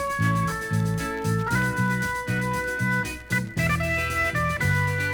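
No technical faults can be heard anywhere in the clip.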